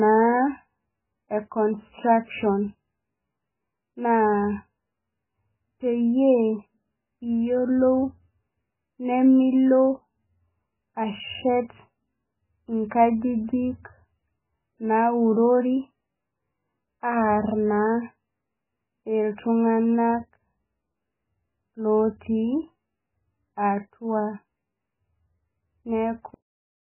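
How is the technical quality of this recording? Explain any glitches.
Pretty rough, honestly. The whole speech clip carries what's likely heavy MP3 compression. Nothing survives above 3 kHz, so it's dull and boxy, and the weak detail that's left swirls and goes watery as the encoder keeps dropping and restoring parts of the spectrum frame to frame. That starved sound fits a bitrate down around 8 kbps.

Then there's a cut-off end at 26.34 s. The final stretch of audio was never written out, so the speech stops dead mid-sound and drops straight into digital silence with no natural decay. There's no tail, just an abrupt edge.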